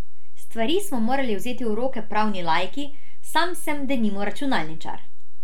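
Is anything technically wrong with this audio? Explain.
Yes. Throughout the speech there is a DC offset: the whole waveform sits shifted away from zero by a constant amount. That offset isn't audible as such, but it eats into headroom on one side and appears as steady energy at the very bottom of the spectrum.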